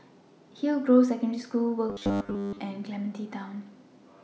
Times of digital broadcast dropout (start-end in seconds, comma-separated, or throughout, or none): none